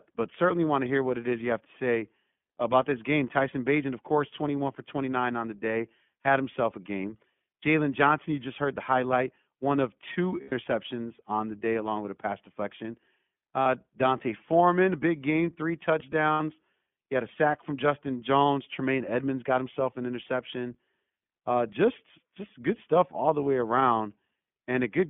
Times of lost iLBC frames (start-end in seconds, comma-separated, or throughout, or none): 10.42-10.53, 13.62-13.66, 16.32-16.41